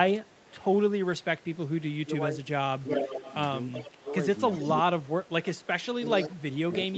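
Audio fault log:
0.26–0.56 s and 2.88 s to the end, echo leak: A delayed copy of the speech comes back about 0.38 s behind the original. In the first stretch it is very faint, about 35 dB below the speech. From 2.88 s it is much stronger, about 10 dB down, and runs to the end. This is likely a far-end loudspeaker whose echo canceller let part of the microphone pickup through, returning the talker's own speech.
2.04–3.16 s, 4.02–4.89 s and 6.16 s to the end, speech suppressed in double talk: The speech dips in level while the other side is also talking. In the first span the dips total roughly half a second and reach about 10 dB. In the second they total about a fifth of a second, also about 10 dB. At the end they reach about 20 dB. This is likely an echo canceller that could not separate the talker from the loudspeaker echo and turned both down, so the level drops. Throughout, the band stops near 8 kHz, as expected through the Opus call path.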